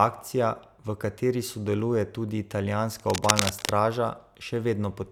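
From 2.99 to 3.69 s, cable scratch noise rasps over the speech at roughly the same loudness, likely from a worn cable or connector being moved so its contact resistance jumps erratically. The waveform shows dense, ragged spikes, and the spectrogram shows irregular broadband vertical streaks.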